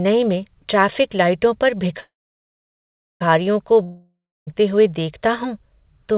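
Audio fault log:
2.00–3.22 s, call audio freeze: brief fading buzz, then about 1.1 s flat near-silent waveform, likely an emptied jitter buffer; sound resumes unchanged, 1.2 s later.
3.83–4.49 s, long network dropout: fading smear then 0.3 s blank spectrogram band; sound returns with about 0.64 s lost, likely from packets that never arrived.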